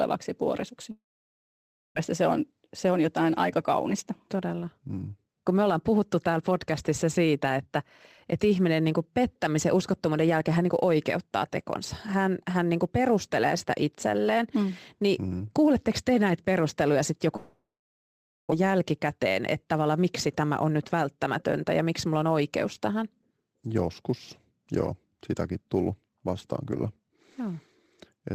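From the start and all the way through, there's a faint hiss and roughness riding on the speech, sitting about 35 dB below it. That's sample clock jitter: the converter's timing wanders by a few microseconds, so fast-changing, loud parts pick up the most error.

Between 0.91 and 1.97 s the sound smears into a fading buzz and then near-silence, and when it resumes roughly 0.8 s has simply gone. That's a long network dropout, most likely a stall in packet arrival that the receiver papered over by stretching the last bit of audio. The same thing happens again from 17.36 to 18.53 s.

After each gap the receiver catches up. From 3.90 to 6.00 s, and again from 18.61 to 22.66 s, the speech runs about 8 to 10 percent faster at the same pitch and sounds a bit hurried. That's jitter buffer speed-up, which trims small pitch-period slices to shed the extra delay.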